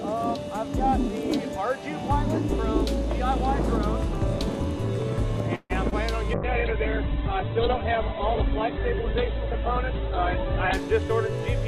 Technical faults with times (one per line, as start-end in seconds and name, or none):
5.55-5.72 call audio freeze
5.90-5.93 short concealed packet loss
6.35-10.81 call bitrate drop